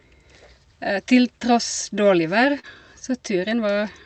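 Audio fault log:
2.59–2.66 s, short concealed packet loss: about 40 ms of the call missed the decoder, which stretched the preceding speech across the gap, heard as a brief smear.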